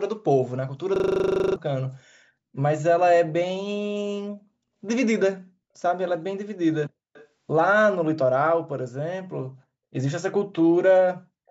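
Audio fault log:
0.96–1.56 s, system hang loop: one 40 ms slice of sound repeats 15 times in a row, giving a rough buzz at 25 Hz where the speech should carry on. The system stalled while the audio hardware kept replaying the same piece of its ring buffer, so roughly 0.7 s of real audio is missing. A waveform shows identical 40 ms blocks tiled end to end. A spectrogram shows a frozen pattern repeating every 40 ms, with energy combed into lines at multiples of 25 Hz.
7.13–7.27 s, echo leak: a brief, very faint copy of the speech follows the original by 270 ms, sitting around 30 dB below it. The likely cause is a far end playing the call through a loudspeaker, where the echo canceller let a scrap of its microphone pickup through and sent it back. On a spectrogram it appears as a weak duplicate of the earlier speech pattern, shifted 270 ms later. The waveform barely changes because the copy is so quiet.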